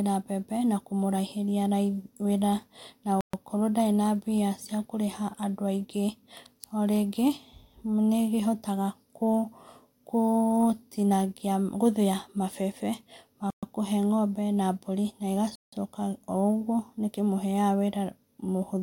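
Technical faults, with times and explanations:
3.21–3.33 s, 13.50–13.63 s, 15.55–15.73 s: Bluetooth stall. Speech cuts to silence for 127, 125 and 170 ms, resuming at "okorwo ndarĩ" and "ngombe na". The likely cause is interference delaying packets until the headphone buffer ran dry.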